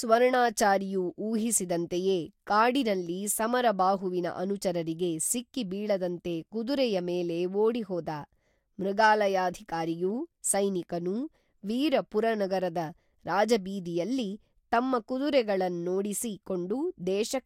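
No technical faults occur anywhere in this speech recording, so there is nothing to place in time order.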